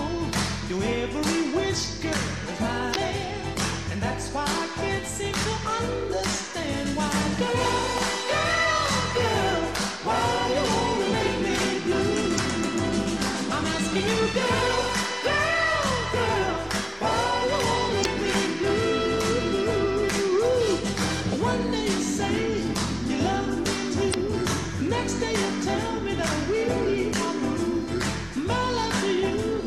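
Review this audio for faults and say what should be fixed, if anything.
Damaged data in a compressed stream at 2.92–2.96, 12.35–12.39, 18.01–18.06 and 24.10–24.14 s: corrupted bytes make the decoder misread frames and resync, producing brief glitches. Verify stream integrity with checksums and retransmit or re-encode from a clean source.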